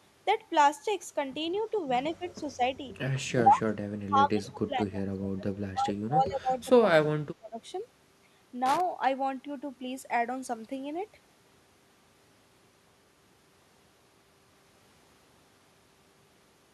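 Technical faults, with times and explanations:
1.53–1.58 s and 1.76–1.81 s, echo leak: two brief, faint scraps of the speech return about 139 ms behind the original, sitting roughly 35 dB down. The likely cause is a loudspeaker on the far end whose echo canceller let a little of its microphone pickup through and sent it back. Reverberation would decay smoothly from each sound, but these are separate, detached copies at one fixed delay.
2.12–2.23 s, 2.41–2.60 s, 3.35–3.67 s, 4.07–5.54 s and 5.72–7.58 s, speech suppressed in double talk: the speech is pulled down in level, dipping by 10 to 25 dB, with the longest and deepest cuts in the two later stretches. The likely cause is an echo canceller confused by both sides talking at once, turning down the talker along with the echo. Packet loss would leave abrupt gaps, but here the level sags and recovers.
8.66–8.81 s, loose connector crackle: a short, irregular burst of scratching breaks into the signal for about 150 ms. 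The likely cause is a worn or dirty contact making and breaking as it shifts, chopping the signal, with any DC on the line adding pops. Clipping distortion would follow the loudness of the speech and a codec glitch would repeat more evenly, whereas this crackle is ragged and random.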